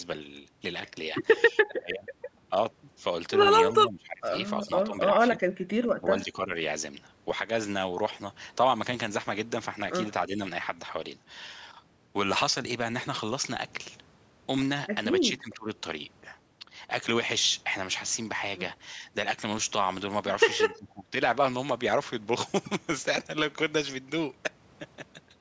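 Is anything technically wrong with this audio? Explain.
Yes, the speech gets pushed down in short bursts, which sounds like speech suppressed in double talk. It happens at 1.51–2.51 s, 3.74–5.41 s, 5.99–6.52 s, 10.28–10.41 s, 15.24–15.69 s and 20.75–21.15 s. The likely cause is an echo canceller that lost track of which sound was its own talker and which was loudspeaker echo while both sides spoke, so it ducked everything. The dips are deepest early on and near 21 s, around 20 to 25 dB, and only slight near 10.3 s.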